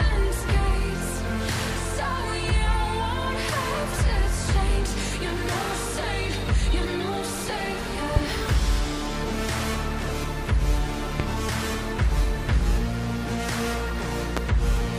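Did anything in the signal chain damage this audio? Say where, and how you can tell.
Yes. A loud pop occurs three times, at 8.16–8.19 s, 11.20–11.23 s and 14.37–14.40 s. Each is a single sharp burst about 30 ms long that peaks roughly 15 dB above the surrounding sound, and the audio continues unbroken beneath it. The likely cause is in the analogue wiring: a brief voltage step or spike, as from a loose connection, switch contact or static discharge, added to the signal and shaped into a short pulse by the circuits that follow.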